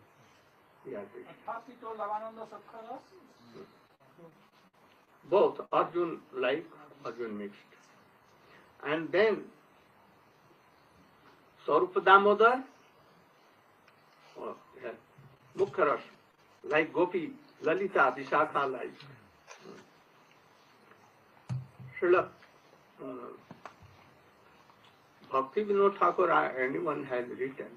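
From 3.57 to 5.95 s, repeated packet loss (robotic sound): seven gaps, the longest 58 ms, were each patched by extending the preceding sound, leaving choppy, robotic audio with pieces missing. From 15.35 to 16.79 s come scattered short gaps: about five isolated holes of roughly 20 ms at most, each bridged by continuation, heard as brief ticks and smears between clear stretches.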